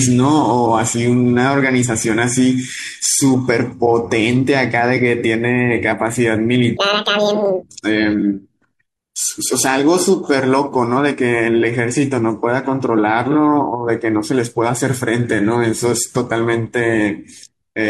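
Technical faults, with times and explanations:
6.77–7.63 s, section at the wrong speed: the speech abruptly turns high and hurried, running 1.81 times too fast and roughly ten semitones sharp, with pitch and tempo jumping together. The likely cause is this stretch being played back against the wrong clock.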